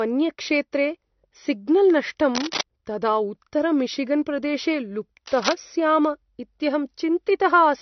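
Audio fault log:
throughout, transcoding between lossy codecs: the sound likely passed through an AAC-style encoder at a low bitrate and then an MP3 encoder. Their smeared, swirly artefacts stack together, and nothing remains above 6.1 kHz.
2.35–2.62 s and 5.26–5.54 s, cable scratch noise: a worn connector or cable, shifting its contact resistance, is the likely cause. It lays short, uneven bursts of scratching over the speech, nearly as loud as the speech itself.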